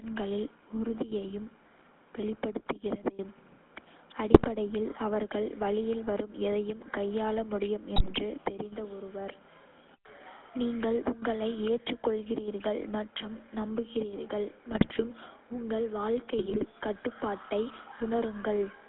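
Throughout the speech the GSM full-rate codec is at work, with the band held to roughly 250 Hz to 3.6 kHz, consistent with the 13 kbps full-rate coder. Its regular-pulse excitation leaves a buzzy, gravelly grain rather than the plain dullness of simple band-limiting.

GSM bit errors then strike at 4.32 to 4.45 s, 7.96 to 8.12 s, 14.70 to 15.03 s and 16.38 to 16.65 s. Corrupted filter, pitch and gain values warp the spectrum and jolt the level into squawks and gargling, not the silent gaps of lost packets.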